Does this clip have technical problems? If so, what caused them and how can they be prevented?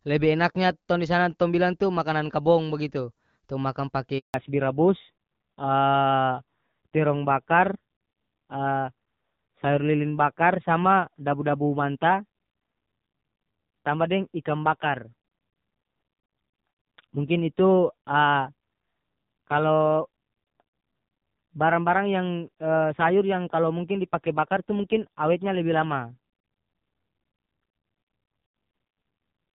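Yes. During a network handover, no speech frames reached the phone while the call moved between links. Right after "kabong bagitu tong makan" the sound dies away, leaving a handover gap of silence from 4.18 to 4.34 s, 160 ms, and whatever was said in it is lost. Keeping the handset on one stable network, or using a network that prepares the target link before switching, prevents this gap.

At the same moment the call fell back from HD Voice to an older narrowband codec. Before 4.34 s the sound has the clear, wideband quality that fits AMR-WB at around 12.65 kbit/s. From 4.34 s to the end, nothing above 4 kHz remains, so the sound is duller and rougher, which points to a low AMR-NB rate near 5.9 kbit/s. Making sure both networks and both handsets support HD Voice end to end keeps the call from being forced onto the narrowband codec after a handover.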